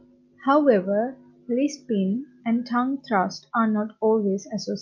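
No technical faults are audible.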